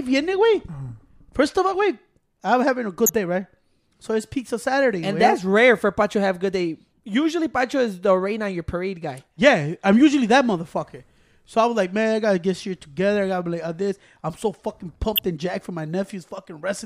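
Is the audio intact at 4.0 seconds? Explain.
Yes, the speech at 4.0 seconds is intact, with no dropout, click, distortion or other fault audible at that moment.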